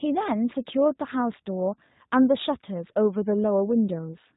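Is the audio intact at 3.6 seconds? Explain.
No. At 3.6 s, as throughout, the speech carries G.729 codec damage, consistent with an 8 kbit/s stream rebuilt from a vocal tract filter, pitch predictor and sparse pulses. It sounds rough and synthetic, and a spectrogram shows a hard ceiling with nothing above 4 kHz.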